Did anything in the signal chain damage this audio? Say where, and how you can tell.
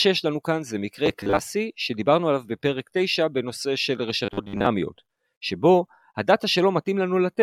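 Yes: robotic sound from repeated short buffers at 1.06–1.39 s and 4.25–4.66 s. A rigid 100 Hz buzz is likely from a starved buffer looping 10 ms chunks while the real audio was skipped.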